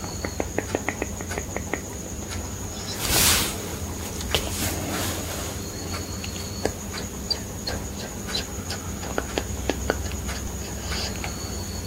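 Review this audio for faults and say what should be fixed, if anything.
There's damaged data in the compressed stream, with short glitches at 1.0, 4.62, 7.69 and 10.47 s, where corrupted bytes made the decoder misread frames and hunt for the next header. Worth re-fetching from a clean source and checksumming files in transit.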